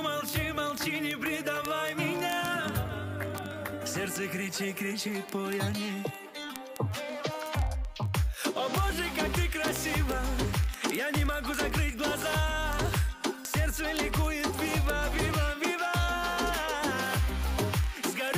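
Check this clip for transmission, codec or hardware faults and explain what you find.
One fault here, and it runs through nearly the whole clip. Word clock ticks, 0.10 to 18.36 s: an unlocked receiver clock drifts around 700 ppm, slipping a sample roughly every 30 ms, heard as a steady stream of ticks.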